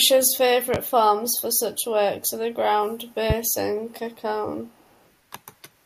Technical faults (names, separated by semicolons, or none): loud pop; echo leak